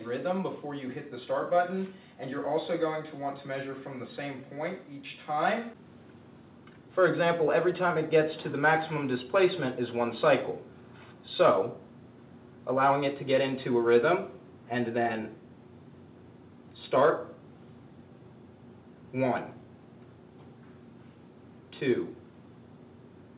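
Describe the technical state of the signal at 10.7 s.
At 10.7 s the signal is intact, carried through the call path with no fault, its content stopping at 4 kHz in the way a narrowband telephone codec such as G.711 would shape it.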